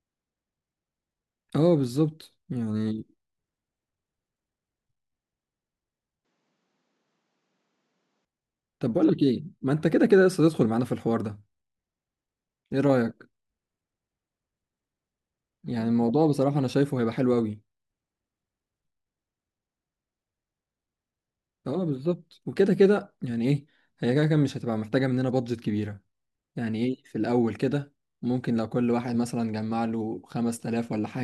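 From 6.25 s to 8.25 s the speech turns duller, with nothing above 8.3 kHz, and a faint new noise floor sits well below it. There is no gap and no clear level change. The likely cause is the input switched to a poorer device.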